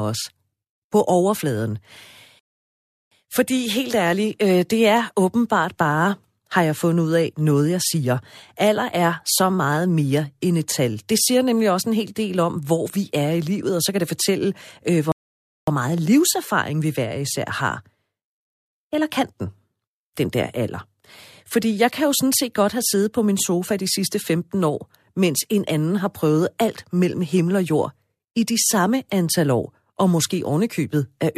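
At 2.39 s the speech halts in a rebuffering stall lasting about 0.72 s, then picks up at exactly the point it left off at 3.12 s. A second stall follows from 15.12 to 15.68 s, adding about 0.56 s. The player ran out of downloaded audio and waited for more, so nothing is skipped, but dead time is inserted. The waveform drops to a flat line and the spectrogram shows a clean, empty vertical gap at each stall.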